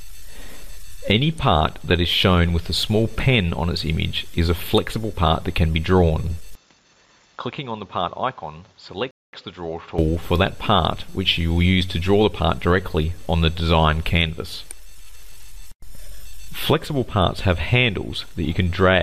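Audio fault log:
6.55 to 9.99 s, input switched to a poorer device: the sound abruptly turns duller and smaller, with no gap at the change, nothing above about 7.3 kHz, a level drop of roughly 10 dB, and a new background hiss sitting well below the signal. At 9.99 s the full, brighter sound returns. The likely cause is a mid-recording switch to a narrower-band input device whose own response, gain and noise floor colour the audio until the original input comes back.
9.11 to 9.33 s, rebuffering stall: the audio drops to dead silence for about 222 ms and then picks up exactly where it left off, so nothing is skipped but the clip runs that much longer. The player used up its downloaded audio and paused until more data arrived, then resumed playback from the same point.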